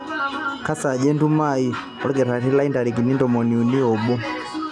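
No technical faults can be heard anywhere in the speech.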